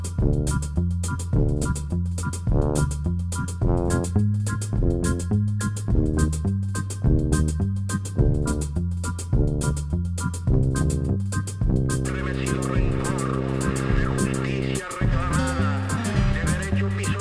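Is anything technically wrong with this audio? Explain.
Yes. Throughout the clip, the high end sounds gritty and metallic, with harsh tones that don't belong to the material and a spectrum that runs hard up to about 11 kHz before stopping. This is aliasing: content above 11 kHz was folded back to wrong, unrelated frequencies, sitting roughly 20 dB below the signal. It suggests the sample rate was lowered from 44.1 kHz to around 22 kHz without an anti-aliasing filter first.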